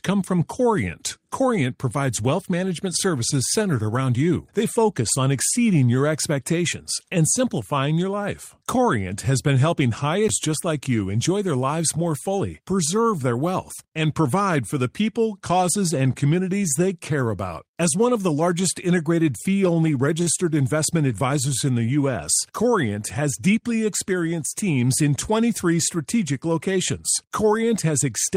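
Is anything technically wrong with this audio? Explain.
Yes, there are two faults in this speech clip.

At 10.28 s, between "has been helping high" and "just like you enjoy", there is a CD skip. The laser lost its place and jumped to another turn of the disc's spiral. The result is a tick and a brief mute of roughly 10 ms, and the speech resumes from a different point in the recording.

From 20.22 to 20.30 s, just before "investment advisors in", there is a short stall from a late packet. A packet missed its playout deadline and the jitter buffer ran dry, so the receiver held the last sound for 41 ms until the packet arrived. No audio is lost, but the sound drags unnaturally, and everything afterwards plays 41 ms later.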